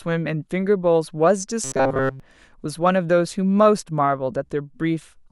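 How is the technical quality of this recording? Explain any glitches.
The recording has one clear glitch. Robotic sound from repeated short buffers, 1.64 to 2.20 s: the speech becomes a rigid metallic buzz near 133 Hz, likely from a roughly 7.5 ms buffer replayed throughout while fresh audio was skipped.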